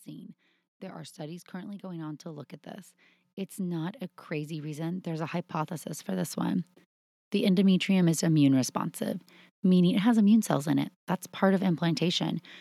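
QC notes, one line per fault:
0.80–2.57 s and 3.56–6.72 s, automatic gain rising: the speech and the background noise swell together, first by about 6 dB up to "at this", then after "at this" by about 11 dB over roughly three seconds. The automatic gain control judged the input too quiet and raised its gain gradually. Because the gain acts on the whole signal, the noise floor climbs along with the speech.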